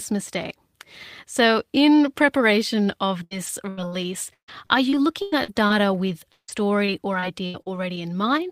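Repeated packet loss hits the speech twice. From 3.23 to 6.50 s, packets go missing or arrive late over and over. The receiver papers over each of the ten gaps, the longest 159 ms, by stretching the last sound it had, so about 22% of that span is filler. From 6.86 to 7.98 s, four more gaps, up to 78 ms, do the same to 14% of the span. Both stretches come out choppy, with pieces of speech missing.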